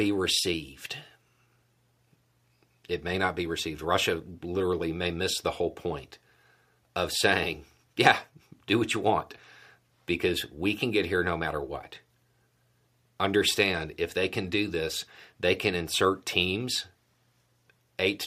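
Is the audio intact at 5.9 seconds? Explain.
Yes, the speech at 5.9 seconds plays through cleanly, with no audible fault at that moment.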